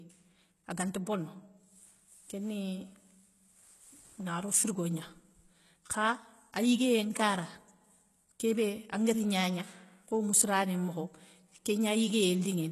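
HE-AAC compression runs throughout the speech, and the damage is plainly audible. Nothing reaches above 12.3 kHz, and the upper band has a synthetic sheen rather than real detail. This is likely spectral band replication: the lower spectrum is coded, and the treble is rebuilt by copying those bands upward under a coarse envelope. The strain suggests a very low bitrate around 16 kbps. The copied harmonics don't line up with the originals, so s sounds come out gritty and metallic.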